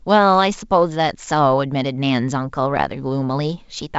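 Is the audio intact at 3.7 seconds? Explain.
Yes, at 3.7 s the speech comes through intact over the 64 kbit/s G.722 wideband telephone coding, with no fault at that moment.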